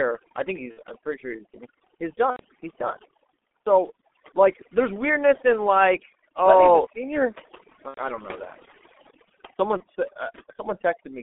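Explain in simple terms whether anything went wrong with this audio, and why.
Yes, a few things. Overdone noise removal has pushed the background down and broken it up into little twinkling specks. The whole clip also went through the G.723.1 codec, an old phone codec that cuts everything above about 3.5 kHz, so it sounds muffled and hoarse with smeared consonants. Finally, there's VoIP packet loss concealed by the speech codec at 0.71–0.79 s, 2.30–2.43 s, 7.88–8.00 s and 9.77–9.83 s, where chunks went missing and the decoder filled in with a fading buzzy tone or coloured noise.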